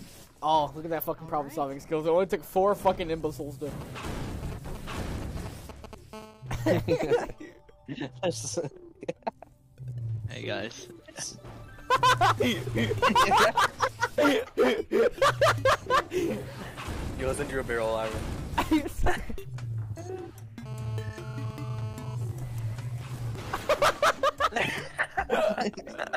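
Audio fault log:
3.81–5.95 s, GSM signalling bursts: a galloping dit-dit-dit of brief 217 Hz buzzes, around 15 dB below the sound. These are short bursts from a nearby 2G phone's radio signalling, rectified by the audio circuit. Unlike the steady call buzz, they come in clusters.
6.13–7.42 s, GSM phone buzz: a continuous, raspy 217 Hz buzz rich in harmonics, about 23 dB below the sound. A 2G phone in a call pulses its transmitter 217 times a second, and the audio circuit rectifies those pulses.
20.66–22.15 s, GSM phone buzz: the same hard, steady 217 Hz buzz returns, stronger at about 18 dB below the sound. Its steady, regular pulsing marks an active call rather than signalling, and it has no relation to the programme.
22.15–24.19 s, GSM signalling bursts: the buzz breaks into even ticks with a longer buzz twice a second at the same 217 Hz rate, around 25 dB below the sound. The phone is still in a call but transmits only intermittently while its user is silent.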